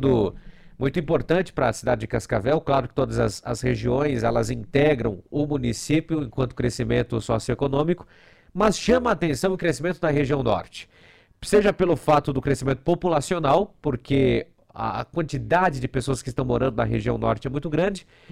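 Overlap-add ripple runs throughout the sound. The level pulses about 11 dB at around 150 Hz. This gives a metallic, robotic buzz from frames overlapping without constant gain.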